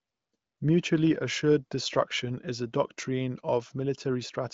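No technical faults can be heard anywhere in this speech clip.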